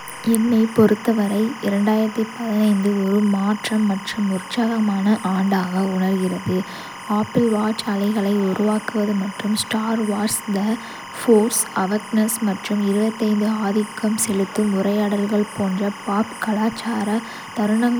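Timecode bleed runs throughout the speech, a steady chirping warble sitting well below the voice. Linear timecode at 25 frames per second is leaking in from a neighbouring track or cable, its square wave flipping between tones near 1 kHz and 2 kHz.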